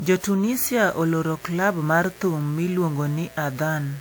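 A short speech clip with two problems. All the way through it sounds swirly, smeared and a bit hollow, with softened consonant attacks, more damage than the top end (reaching about 20.1 kHz) would suggest. That's most likely generation loss: the artefacts fit something like WMA 1 at 128 kbit/s re-encoded around seven times, each pass re-quantising on a shifted frame grid so the noise and spectral holes pile up. Then from 0.48 s to the end there's a steady, raspy mains buzz, 60 Hz-based, sitting about 25 dB below the speech. Its harmonics spread well up into the kilohertz range, the sort of spiky interference a dimmer, rectifier or poorly shielded cable lets in twice every mains cycle.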